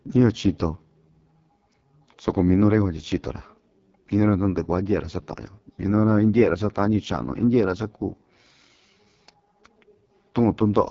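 Throughout, an AMR wideband (HD Voice) codec running at what sounds like 6.6 kbit/s makes the speech rough and raspy, with nothing above 7.5 kHz.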